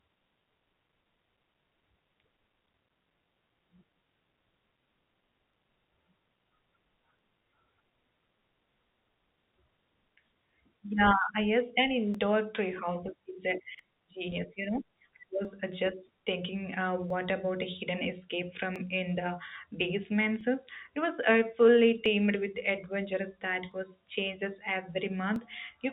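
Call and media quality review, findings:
Clock drift buffer slips, 0.57–25.36 s: regular click every 1.65 s through the speech, roughly fifteen in all. Likely cause: sender and receiver clocks mismatched by something like 700 ppm, so the jitter buffer drifts until a block of around 50 samples is dropped or repeated. Heard over the G.711 mu-law path, band-limited to 3.8 kHz.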